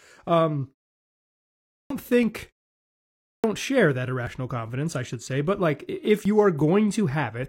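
After a silence of about 0.97 s, the output device had gone idle and needed time to wake. This is a clipped start after a pause: speech resumes at 1.63 s with roughly the first 0.27 s lost, so it begins abruptly, already in progress. The same happens after a 0.74 s pause: at 3.18 s about 0.26 s is swallowed, and the sound again jumps straight out of silence without its opening.

Later, the time stamps of consecutive stream segments overlap, and the player discards material that was never actually duplicated. This overlap between stream segments removes about 31 ms at 4.27 s and about 17 ms at 6.25 s, and the waveform jumps forward at each point, giving a tiny skip. The two events fall about 2 s apart, which fits segments 2 seconds long.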